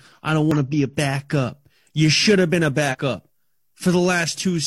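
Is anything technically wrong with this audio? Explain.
Yes. The speech has two glitches from damaged data in a compressed stream. The first runs from 0.51 to 0.56 s, between "I don't" and "to be a". The second runs from 2.88 to 2.95 s, right after "should have been a". In both places the decoder hit corrupted bytes. It lost sync and hunted for the next valid frame header. Each one is heard as a short glitch.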